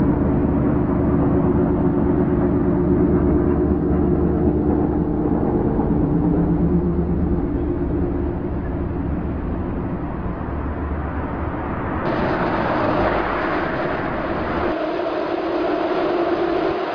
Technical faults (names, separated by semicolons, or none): none